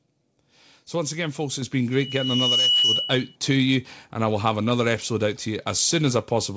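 At 1.62 s the microphone volume is stepped up: the call software judged the input too quiet and raised the device gain in a single jump of about 5 dB, so the speech and the background noise become abruptly louder together.

From 1.92 s to 3.36 s there is a loudspeaker feedback squeal. The microphone picks up the loudspeaker it feeds, and at 2.9 kHz the loop gain exceeds one. That tone swells over roughly 0.7 s into a steady squeal, ending a few dB above the speech.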